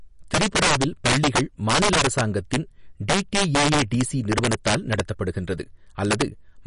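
From the start, integer overflow cracks through the speech. Loud peaks, pushed about 9 dB too hot, wrap to the opposite sign instead of clipping, giving sharp, violent snaps.

Throughout, the sound is watery and swirly, with nothing above 10.6 kHz. This is likely MP3 compression, and the plainly audible damage fits a low bitrate around 40 kbps.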